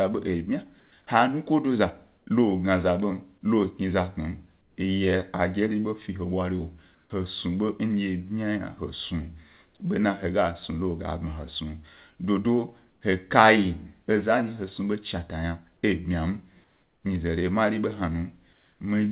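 Comfort noise in place of the background, likely from discontinuous transmission, fills pauses at 0.8 s before "he nukodo", 2.18 s before "lo gna za ḃom", 4.61, 6.95, 12.92, 16.64 s before "nyize re mari", and 18.53 s. Each stretch lasts 90 to 390 ms. The detailed background gives way to a flat, featureless hiss, up to about 6 dB quieter. On a spectrogram these show as smooth, uniform patches below the 4 kHz ceiling of the call path. At 7.08 s, an onset clipped by the voice detector, likely a late trigger, loses its first 20 ms. The waveform jumps abruptly from noise to full level.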